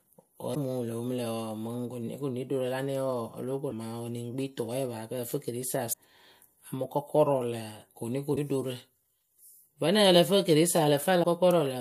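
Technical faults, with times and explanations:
0.51–0.57 s, 3.67–3.73 s, 5.89–5.94 s, 8.32–8.38 s and 11.20–11.25 s: damaged data in a compressed stream. At each point a stretch of the encoded speech arrives corrupted, so the decoder misreads those frames, loses its place in the bitstream and has to hunt for the next valid frame header before it can resume. Each break lasts about 46 to 56 ms and is heard as a chirp, squawk, click or short hole cutting into the speech.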